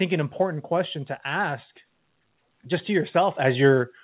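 At 3.39 s the microphone volume steps up. The call software judged the input too quiet and raised the device gain in one jump of about 7 dB. Speech and background get louder together. Everything sits below 4 kHz, consistent with a narrowband G.711 call path.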